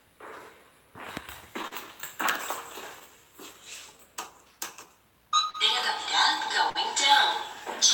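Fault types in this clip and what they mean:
Clock drift between sender and receiver: The sending clock runs roughly 3 percent slower than the receiver's, so the jitter buffer keeps draining. The result is uneven timing hiccups across the whole clip. On a waveform these show as scattered small stretched or repeated segments rather than one clean event.
Short stall from a late packet: Three times the buffer ran empty and the last sound was held until the packet arrived: 39 ms near 1.67 s, 39 ms near 5.50 s, and 53 ms near 6.70 s. Nothing is lost. A spectrogram shows brief frozen, smeared columns there.
Repeated timing corrections: From 3.11 to 5.12 s the receiver repeatedly pads the audio, playing at 97 percent speed and adding around 70 ms in total. On a waveform, small duplicated slivers appear at irregular spacing through that stretch.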